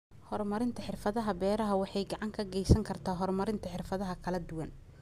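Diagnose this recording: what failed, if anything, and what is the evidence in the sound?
A block size mismatch (truncated) between driver and buffer stages: one stage writes blocks longer than the next reads, and the tail of each block is discarded. From 0.91 s to 3.79 s the speech carries a steady buzz at about 43.1 Hz, the rate at which the blocks are chopped, which fits 1024-sample blocks at a 44.1 kHz rate. Pitch holds and the pace stays essentially normal.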